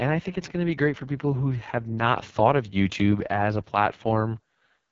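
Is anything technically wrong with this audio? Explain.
Yes. AMR wideband (HD Voice) codec damage runs throughout. The speech is rebuilt from a pulse-excited vocal tract model, and nothing exists above 7.4 kHz. The heavy roughness and raspy texture fit the codec's lowest 6.6 kbit/s mode.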